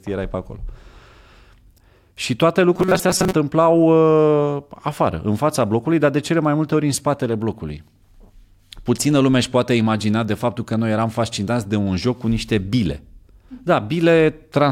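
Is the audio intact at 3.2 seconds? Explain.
No. From 2.74 to 3.33 s there is robotic sound from repeated short buffers, likely from audio arriving too seldom, so about half the time a roughly 5 ms slice is looped. That imposes a rigid 188 Hz metallic buzz, seen as evenly spaced horizontal harmonic stripes and identical repeating waveform cycles.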